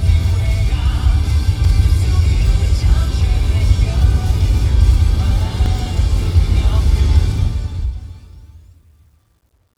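At 1.65 s and 5.66 s, the sounds jump with a tiny skip. This is overlap between stream segments, trimmed at 4-second segment boundaries.

From 7.20 s, the fade-out turns gritty. This is truncation distortion on a fade, with only 11 bits kept and no dither. From 8.35 s the grit is at its worst.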